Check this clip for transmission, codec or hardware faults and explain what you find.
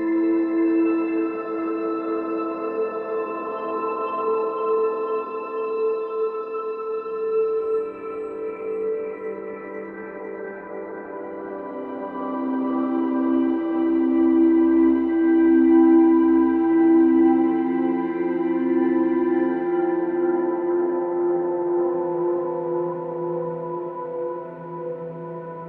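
No transmission, codec or hardware faults.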